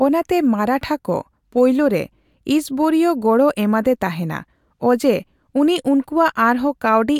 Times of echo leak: none

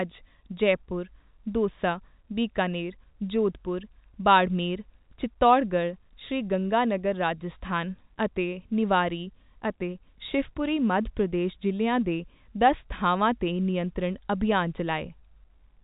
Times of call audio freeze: none

